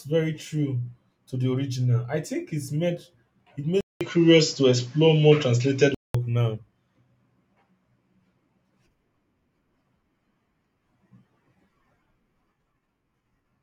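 After a 0.2 s silence at 3.81 s, the speech turns dull until 6.14 s. It loses everything above 7.6 kHz. This is likely an input switched to a poorer device.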